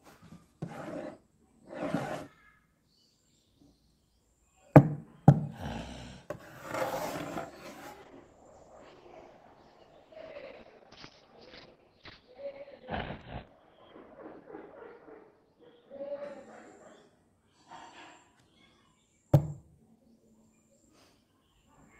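Audio carried over an Opus call shows a call bitrate drop from 8.02 to 19.37 s: the top end narrows to about 4 kHz and sounds rough and watery for roughly five seconds, consistent with a fall from about 32 to 8 kbps. Unlike packet loss, the audio stays continuous rather than breaking into gaps.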